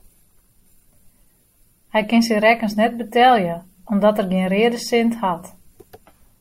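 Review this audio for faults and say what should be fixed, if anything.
Nothing in this recording needs fixing. No fault can be heard anywhere in the speech, so there is nothing to prevent.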